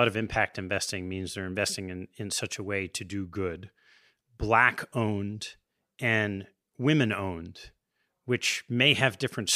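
No technical faults can be heard anywhere in the recording. The speech runs without any event that points to a problem in how it was captured or delivered.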